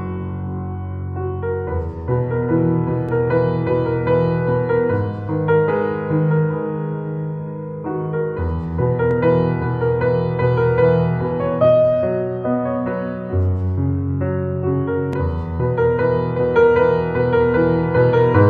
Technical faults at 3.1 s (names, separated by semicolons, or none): overlapping chunks